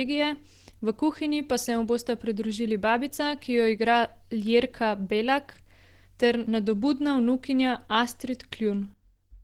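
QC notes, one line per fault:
Throughout: Opus compression. The speech sounds muffled and hoarse, with grainy, noise-filled upper frequencies and plainly audible damage, likely from Opus running in its hybrid speech mode at a low bitrate, which fits roughly 16 kbps, substituting coarse band fill for detail.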